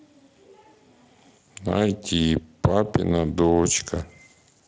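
No technical faults are audible.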